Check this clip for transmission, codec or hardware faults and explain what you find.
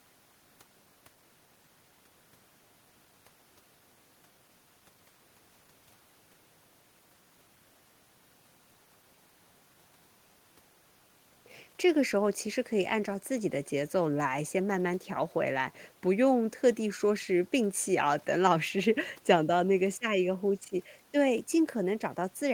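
No transmission, codec or hardware faults are audible anywhere in the speech.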